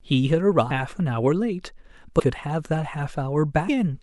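Compressed frames are skipped three times, at 0.70 s, 2.18 to 2.20 s and 3.67 s. Each time, roughly 300 ms of speech is simply missing: the decoder never played a run of frames, either because they were absent from the stream or because they were rejected as damaged. The jump fits about ten frames of 26.1 ms. Overlapping neighbour frames blend across the gap, so each join is a short smeared blip rather than a sharp click.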